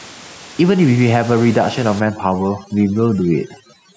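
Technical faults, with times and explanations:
Throughout, gain pumping: a fast limiter, likely fighting excessive input gain, pulls level down on loud sounds, so level swings about 5 dB.
2.0–3.97 s, overdone noise removal: an over-strong noise reducer mutes bands near its noise estimate, so the background drops and breaks up into twinkling specks.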